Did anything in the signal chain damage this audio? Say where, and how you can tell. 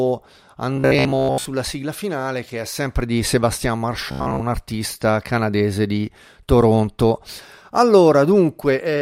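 Yes: robotic sound from repeated short buffers at 0.77–1.47 s, before "sigla finale che è", and 4.12–4.43 s, before "artista canadese di", likely a starved driver buffer. Replaying about 15 ms chunks over most of the sound imposes a fixed 66.8 Hz buzz, unlike codec warble, which wanders.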